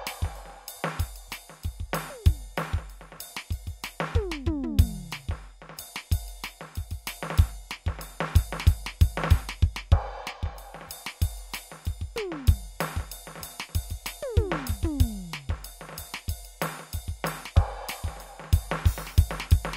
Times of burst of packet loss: none

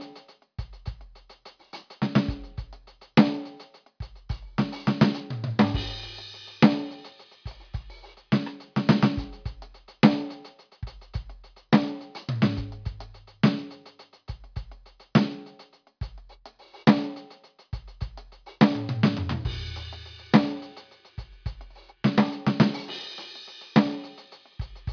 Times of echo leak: none

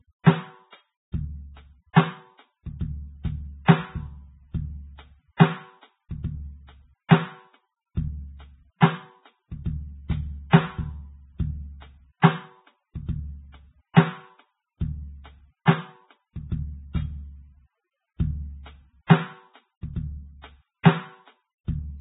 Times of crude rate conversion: none

